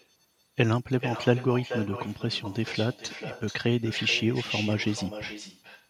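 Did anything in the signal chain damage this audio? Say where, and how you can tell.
Yes: echo with no canceller at the call-processing stage lets the far loudspeaker leak back, so throughout, the speech returns roughly 400 ms later as a thinner copy about 12 dB quieter.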